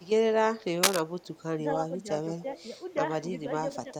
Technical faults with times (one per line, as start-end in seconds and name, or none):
0.01-0.09 echo leak
0.83-1.00 cable scratch noise
1.21-1.43 echo leak
1.89-2.08 speech suppressed in double talk
2.40-2.64 echo leak
3.84-3.92 speech suppressed in double talk